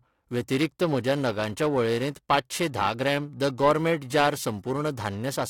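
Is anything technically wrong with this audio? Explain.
Yes. Periodic clock jitter runs through the whole speech clip. The converter's sampling clock is being shaken at around 1 kHz. This puts sidebands about that far above and below every component, strongest on high-frequency content. It sounds rough and metallic, disappearing in pauses.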